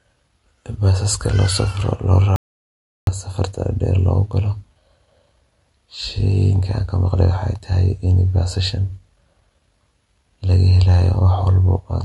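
From the start, plainly audible MP3 compression, likely around 50 kbps, leaves a watery, swirly sound with a hard spectrogram ceiling at 11.3 kHz and flickering patches below it. From 2.36 to 3.07 s, an audio dropout to silence, likely lost input, cuts 0.71 s to silence with no room tone.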